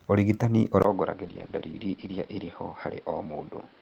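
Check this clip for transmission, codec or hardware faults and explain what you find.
Two faults affect this speech clip, and they overlap.

From 0.82 s to the end, the input most likely switched to a poorer device. A gap of about 20 ms marks the change. Afterwards the band stops near 5.4 kHz, the level is roughly 5 dB lower, and a new, faint background noise appears, so the speech turns duller and boxier.

From 1.25 to 2.35 s there is a call bitrate drop. The encoder was starved of bits for about one second, which fits a fall from roughly 32 kbps to 13 kbps. It coded the speech more coarsely, so the already narrowed sound turns audibly rougher until it recovers.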